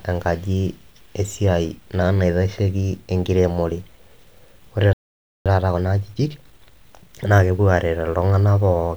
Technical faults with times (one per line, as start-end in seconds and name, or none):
4.93-5.46 playback stall
5.46-7.56 time-compressed catch-up